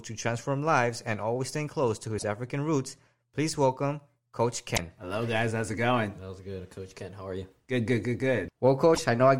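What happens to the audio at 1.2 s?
At 1.2 s the speech continues cleanly, with no dropout, click, distortion or other fault at that moment.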